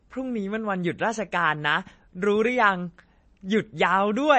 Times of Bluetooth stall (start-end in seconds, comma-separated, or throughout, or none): none